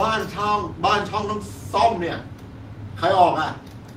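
Speech recording with no technical faults to report. Nothing at any point in it calls for a time or a cause.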